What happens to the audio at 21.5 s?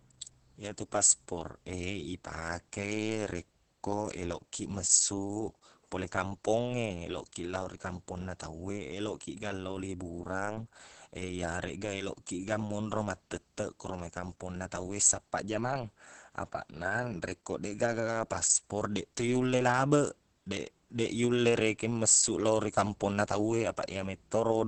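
At 21.5 s the speech is still carrying the Opus voice compression that runs through the whole clip. The band stops near 8.3 kHz, and the SILK linear-prediction coder's coarse excitation makes the voice muffled, hoarse and faintly robotic, which points to a low rate of around 10 kbps. A simple low-pass filter would dull the top end but keep the voice smooth. Here the roughness in the voice itself marks heavy codec damage.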